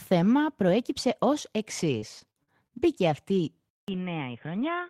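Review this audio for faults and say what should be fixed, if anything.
From 1.99 to 2.74 s, just after "θέμα προέκυψε ως εξή", the speech turns choppy and robotic. Short holes, the longest 44 ms, are patched by stretching the previous sound. This is repeated packet loss, with about a fifth of that stretch concealed. A larger jitter buffer and a steadier network link would prevent it.

At 3.69 s the sound drops out for 0.19 s. It then returns dull and boxy until the end, with nothing above 3.6 kHz, about 5 dB quieter, and with new background noise roughly 50 dB down. The likely cause is the input switching to a poorer device. Locking the recording to one fixed input device would prevent it.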